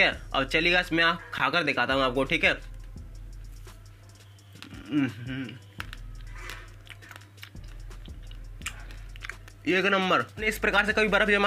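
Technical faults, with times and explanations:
1.38 s, Bluetooth stall: interference likely held back packets on the wireless link, so the headphones' buffer emptied and playback paused until the resent data arrived. The sound cuts to silence for 16 ms, a brief dropout, then carries on.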